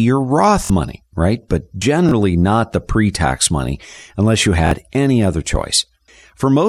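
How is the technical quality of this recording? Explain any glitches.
Three short stutters break the speech. Each is a repeated buffer: audio arrived late, so the device replayed its last block of about 23 ms, consistent with a 1024-sample buffer. At 0.65 to 0.70 s, before "money right", it plays twice more. At 2.09 to 2.11 s, before "not the pre tax", it plays once more. At 4.67 to 4.71 s, after "tax money unless you", it plays twice more. Each sounds like a hard-edged stutter, with about 50 ms, 20 ms and 50 ms of speech lost.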